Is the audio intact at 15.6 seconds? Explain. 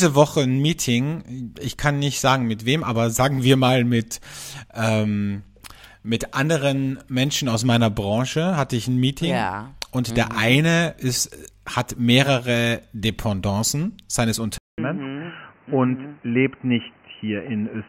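No. From 14.58 s to the end of the clip at 17.88 s, the speech sounds like an input switched to a poorer device, most likely a change to another microphone or a headset's call profile. A silent gap of 200 ms marks the switch. After it the sound turns dull and boxy, with nothing above 3 kHz and a new noise floor roughly 30 dB under the speech, while the loudness stays much the same. A spectrogram shows the upper band suddenly empty, and the waveform shows a flat gap at the switch.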